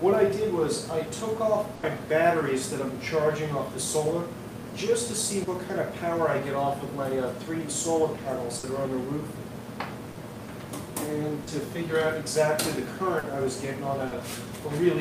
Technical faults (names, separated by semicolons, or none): burst of packet loss; short concealed packet loss